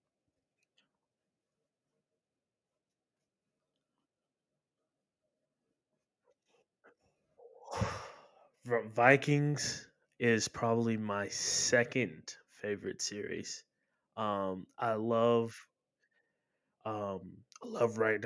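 No technical faults can be heard in this speech recording.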